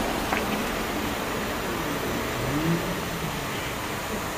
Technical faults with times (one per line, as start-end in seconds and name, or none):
0.00-4.38 audio read two samples at a time (double speed)